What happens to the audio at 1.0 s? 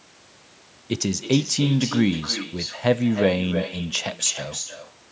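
At 1.0 s the far end is playing the call over a loudspeaker with no echo canceller, so its microphone sends the speech back, as it does throughout. Each phrase returns roughly 300 ms later as a thinner copy about 10 dB quieter.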